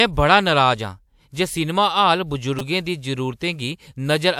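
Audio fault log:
2.59–2.61 s repeated buffer: late audio made the device replay one 5 ms buffer four extra times, giving a brief 200 Hz buzz.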